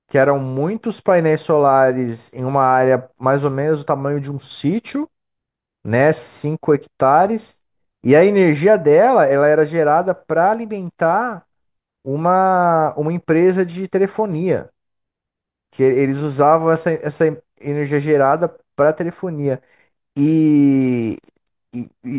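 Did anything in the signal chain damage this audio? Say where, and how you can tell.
No, nothing in this speech recording shows damage from the signal chain. There is no stage to point to, because no event in the audio marks a problem anywhere along the path.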